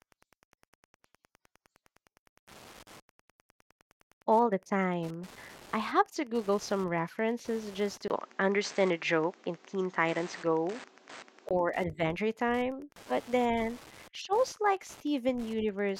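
Right through the speech there's Wi-Fi interference: a nearby radio's beacon, every 102.4 ms, gets rectified by the circuit, giving a faint, steady tick about ten times a second. Just after "some references just", at 8.08 s, there's a 20 ms gap, then the sound turns duller and a little different in level, with nothing above 8.4 kHz and a faint new hiss. It recovers at 11.51 s, most likely the input switched to a poorer device and back.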